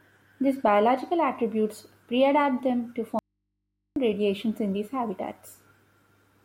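Speech runs normally until 3.19 s, when it cuts out abruptly and does not return until 3.96 s, a gap of about 0.77 s. Instead of silence or a natural pause, the gap holds a low mains hum far beneath the speech, roughly 55 dB down, before the signal snaps back in mid-flow. This is an audio dropout to a faint residue, likely caused by a momentary loss of the source while the downstream input stayed live and picked up hum.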